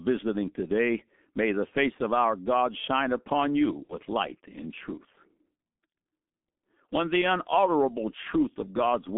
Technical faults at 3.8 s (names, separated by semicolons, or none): G.723.1 codec; VoIP packet loss concealed by the speech codec